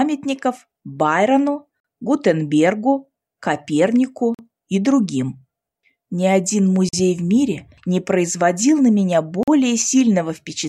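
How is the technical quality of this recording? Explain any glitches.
The recording is marred by four clean interruptions caused by a gap between chunks. They fall at 1.80, 4.34, 6.89 and 9.43 s, each a 44 ms hole. The audio was handled in 2.5 s chunks, and silence is inserted at each join. Because the sound resumes exactly where it stopped, nothing is missing. That sets it apart from a dropout, which removes material. The strict regular spacing also marks it as a chunking fault rather than random loss.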